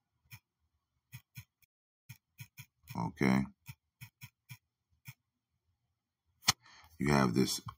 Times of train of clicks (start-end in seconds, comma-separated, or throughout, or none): none